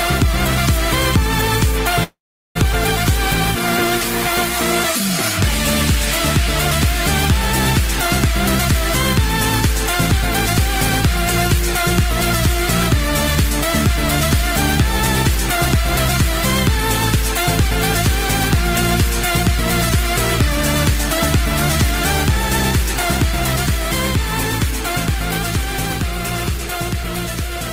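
At 2.03 s the sound breaks into a call audio freeze lasting until 2.57 s: a brief fading buzz or hiss, then about 0.4 s of silence, showing on a spectrogram as smeared, decaying harmonics followed by a blank gap. Delayed packets likely emptied the jitter buffer, inserting 519 ms without losing content.

From 25.67 s to 27.60 s a jitter buffer speed-up speeds up the audio by about 3% at unchanged pitch, as the receiver trims short pitch-period pieces, around 50 ms in total, to shed the delay. The waveform shows slightly compressed timing, while spectrogram harmonics keep their spacing.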